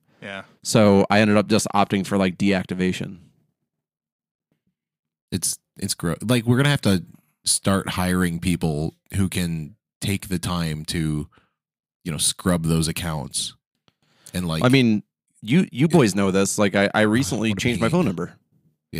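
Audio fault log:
No faults are present; the speech signal arrives intact and continuous across the whole recording.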